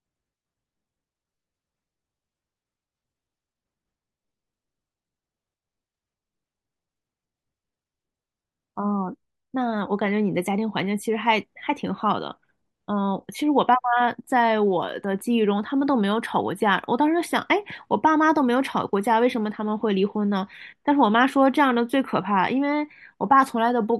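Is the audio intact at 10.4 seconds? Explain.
Yes, the speech at 10.4 seconds plays through cleanly, with no dropout, click, distortion or other audible fault at that moment.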